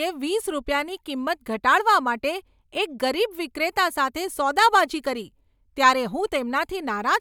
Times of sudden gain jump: none

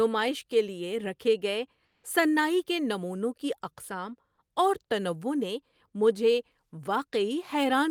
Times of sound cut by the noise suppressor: none

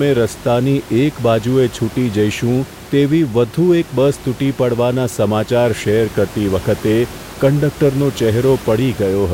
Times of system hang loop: none

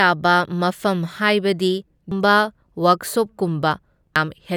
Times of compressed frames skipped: 2.11, 4.16

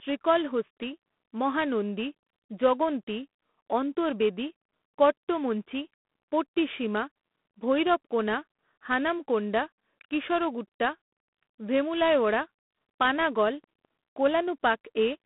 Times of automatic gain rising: none

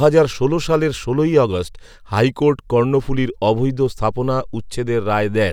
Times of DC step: 3.86-5.53

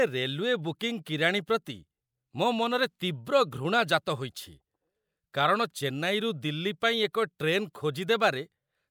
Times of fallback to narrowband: none

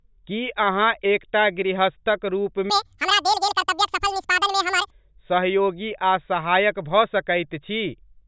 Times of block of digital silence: none

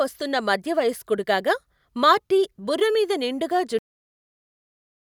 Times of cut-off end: 3.79-5.00

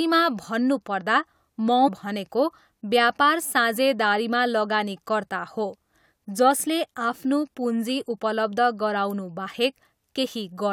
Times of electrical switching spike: 9.10

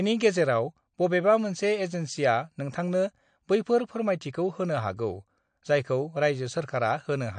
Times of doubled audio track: none

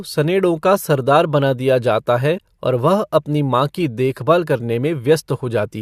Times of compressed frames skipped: 2.37-2.39

